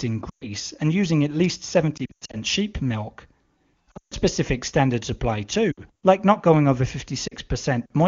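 Speech carried over clear AMR wideband (HD Voice) audio is broken by lost AMR speech frames at 0.29–0.45, 1.97–2.37, 3.91–4.18, 5.71–5.80 and 7.28–7.34 s. The decoder stretches the last good sound with falling gain, heard as brief warbles and fast fades to near silence and seen as flattened harmonics and a shrinking waveform.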